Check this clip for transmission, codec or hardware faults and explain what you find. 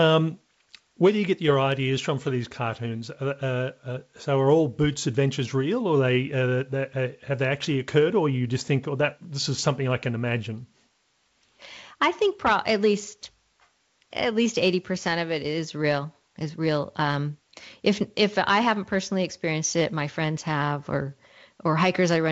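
Listening through the speech, nothing stood out as a problem.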